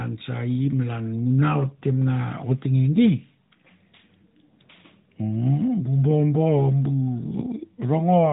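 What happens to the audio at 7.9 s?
Nothing goes wrong at 7.9 s; the speech carries on intact through that moment, with only the steady narrowband sound of the AMR mobile codec path that runs through the whole clip.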